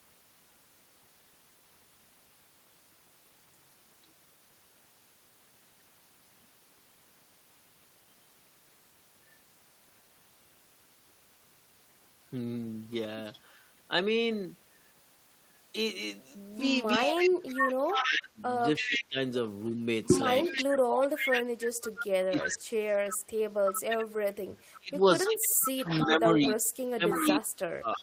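At 13.32 to 13.39 s, a faint echo leak appears, about 30 dB below the speech and delayed 326 ms. The remote echo canceller likely missed some loudspeaker pickup.

From 16.94 to 26.07 s, the echo leak returns much louder, about 5 dB below the speech, still 326 ms behind.

From 16.97 to 22.98 s, speech is suppressed in double talk. Across roughly 4 s, the voice dips by up to about 30 dB. The canceller likely mistook it for echo.

From 24.79 s to the end, the same suppression recurs, with drops near 30 dB.

At 27.11 to 27.27 s, a brief echo leak sits about 10 dB down.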